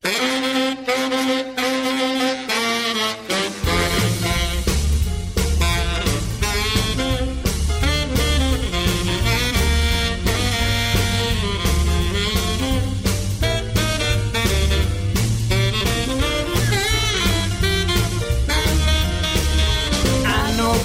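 No technical faults can be heard anywhere in the audio. Nothing in the sound points to a problem with how it was captured, processed or delivered.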